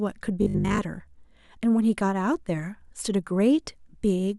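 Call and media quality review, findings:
Robotic sound from repeated short buffers, 0.42 to 0.78 s. Probable component: playout or jitter buffer, likely starved of incoming audio, looping its last chunk while new audio is skipped. Most of the span is repeats. Loop rate fits a 20 ms buffer, imposing a fixed 50 Hz buzz. The speech turns rigid and metallic, tracking the original only loosely.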